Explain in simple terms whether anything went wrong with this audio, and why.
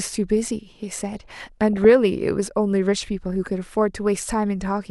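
DAB burbling from 1.15 to 1.92 s: weak radio reception let corrupted bits through, so short blips of noise pop up in slices of the speech.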